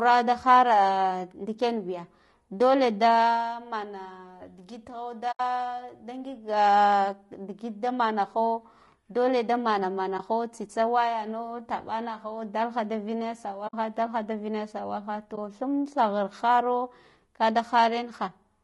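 Throughout the recording the speech sounds rough and grainy, with a hiss that fills the gaps between the harmonics and an upper band that sounds thin and synthetic. This is plainly audible low-delay AAC compression, likely AAC-ELD at about 32 kbps. The short frames that keep the delay low cannot separate closely spaced pitch harmonics well, and at this bitrate the encoder has too few bits left to code them cleanly.

At 5.31 to 5.40 s the sound fades out and back in around a short, soft-edged hole of about 80 ms. This is AAC frame loss with muting. The span fits roughly four lost frames whose spectra the decoder set to zero, and the overlapping windows on each side smooth the gap into a fade. Briefer holes of about 20 ms follow at 10.17 to 10.20 s and 15.35 to 15.38 s, and a 60 ms hole falls at 13.67 to 13.74 s.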